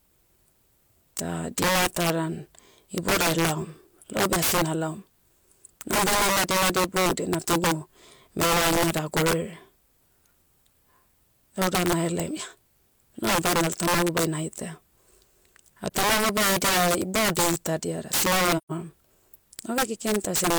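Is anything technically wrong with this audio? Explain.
Yes, two things. Integer overflow runs through the whole clip: the speech is driven roughly 25 dB too hot, and the loudest peaks wrap to the opposite sign, giving harsh cracks much sharper than clipping. AAC frame loss with muting shows up at 15.86 to 15.90 s (43 ms, fitting one lost frame) and 18.57 to 18.72 s (128 ms, about three frames). Those spectra were zeroed, so the sound fades out and back in: a brief dip at the first spot and a soft-edged gap at the second.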